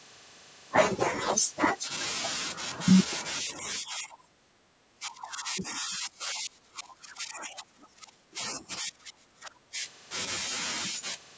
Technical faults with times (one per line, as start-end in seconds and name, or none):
3.59-9.75 speech suppressed in double talk